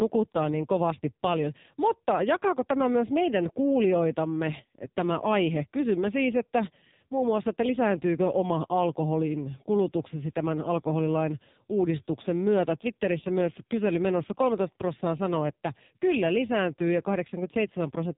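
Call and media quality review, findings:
AMR narrowband mobile codec, whole clip, heavily damaged. Speech is buzzy and synthetic, with nothing above 3.8 kHz. Probably a low AMR-NB mode, roughly 6 kbps going by the sound. The vocal-tract model gets too few pulses per 5 ms, so the excitation sounds coarse. Check for a narrowband fallback.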